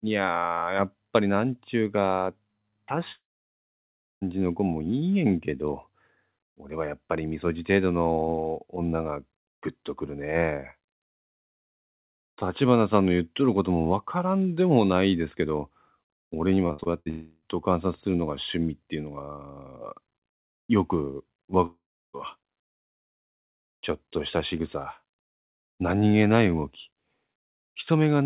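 At 3.12 to 4.23 s, a long network dropout, likely a stall in arriving audio, loses about 1.1 s. A brief fading buzz gives way to roughly a second of silence before the sound resumes further on. From 16.67 to 17.08 s, repeated packet loss leaves five short holes, the longest 62 ms, patched across about 41% of the span. It sounds choppy rather than going silent. A dropout follows immediately at 17.10 to 17.44 s, likely a stall in arriving audio, where the 0.32 s gap is filled throughout with no silence. Another dropout at 21.66 to 22.15 s, likely a further interruption, drops about 0.48 s, including roughly 0.34 s of silence. The dropouts are single continuous gaps, not a string of closely spaced holes.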